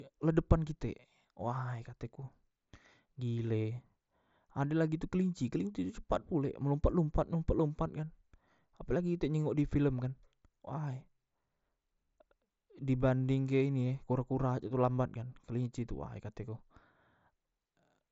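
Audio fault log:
Nothing stood out on listening to this speech clip.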